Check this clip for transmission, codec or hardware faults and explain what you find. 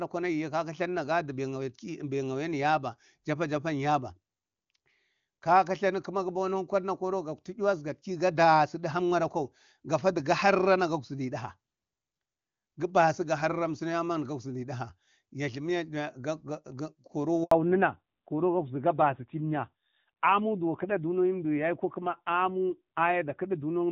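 Two faults appear near the end of the speech, a handover gap followed by a fallback to narrowband, where the clear HD Voice sound gives way to a duller line.

Handover gap, 17.43 to 17.51 s: during the network switch, no speech frames arrived for 80 ms. Unlike a dropout from packet loss, the silence is a single clean gap at the exact point where the bandwidth then changes.

Fallback to narrowband, from 17.51 s to the end: the call switched from AMR-WB to narrowband AMR. Nothing above 4 kHz remains, and the rougher texture suggests a low rate around 7.4 kbit/s. Unlike a brief filter glitch, the dullness persists to the end.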